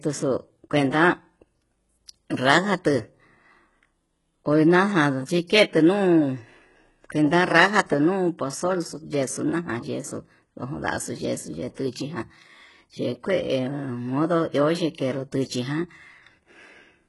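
Throughout, the speech has a gritty, metallic treble, with sibilants sounding lispy and nothing above 11.4 kHz. This is likely HE-AAC compression at a very low rate, around 12 kbps, whose replicated upper bands don't match the real harmonics.

At 11.75 s and again at 15.45 s, a short hiss runs ahead of a sharp onset, lasting 29 ms and then 45 ms, and softens each attack. This is pre-echo: quantisation noise spread across the codec block leaks into the quiet moment before the transient.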